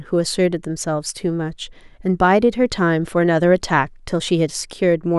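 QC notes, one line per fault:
No audible faults found in this speech recording.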